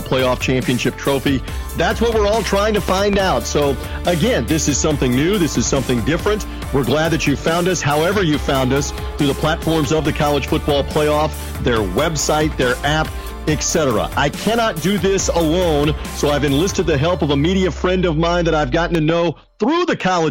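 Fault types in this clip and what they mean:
Loud pop: A pair of sharp pops sits on top of the sound from 2.89 to 3.16 s, peaking about 15 dB above the signal, and a second pair from 18.95 to 19.12 s, about 10 dB above it, with the sound carrying on underneath both. The likely cause is a brief voltage step or pulse, as from a plug, switch, static or driver glitch, entering the signal path and being shaped by the circuits downstream.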